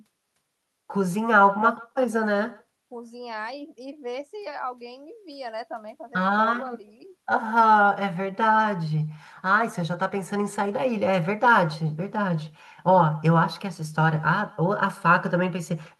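From start to end, echo with no canceller. A far loudspeaker feeds its microphone, returning each phrase about 23 dB quieter. It trails by roughly 150 ms.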